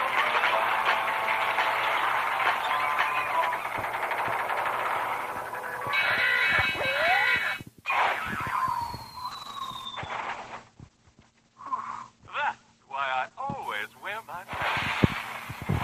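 From about 9.31 to 13.69 s the audio goes through a call bitrate drop. The top end gets cut at around 8 kHz instead of 20 kHz, and things turn coarse and smeared, which fits the encoder falling from roughly 32 to 11 kbps after a bandwidth squeeze.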